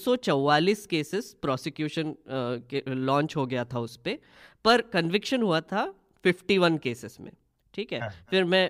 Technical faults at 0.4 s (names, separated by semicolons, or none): none